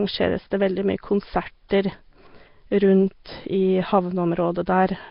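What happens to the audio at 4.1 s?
Nellymoser compression is likely at work at 4.1 s, as it is across the whole clip. This Flash-era codec spends a fixed two bits per sample on 256-sample blocks, so weak bands get no bits and are filled with synthetic noise. The damage here is heavy: speech carries a rough, hissy halo and a smeared, underwater quality, with nothing above 5.3 kHz, which fits a bitrate of about 22 kbps.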